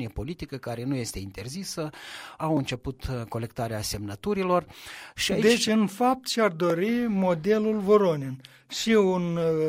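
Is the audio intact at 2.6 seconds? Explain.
No. At about 2.57 s there is a block of digital silence: for roughly 1 ms, a short run of samples was replaced by zeros, as happens when the output buffer is not filled in time. The waveform drops abruptly to silence and jumps back with no fade. Because the gap is so brief, the two hard edges merge into a single sharp tick rather than an audible hole.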